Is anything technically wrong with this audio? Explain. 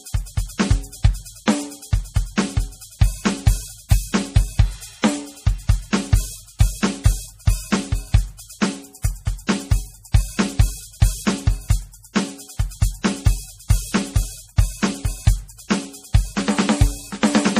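Yes. MP3 compression runs throughout the music: nothing sounds above 15.2 kHz, and the plainly audible swirly, watery texture and smeared attacks point to a likely low-bitrate MP3 encode around 40 kbps, where the encoder starves weak frequency lines so they flicker between frames.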